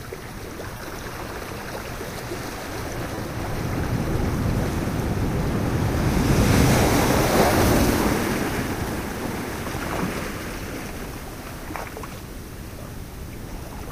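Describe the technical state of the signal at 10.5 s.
At 10.5 s the signal is intact, with no audible fault at that moment.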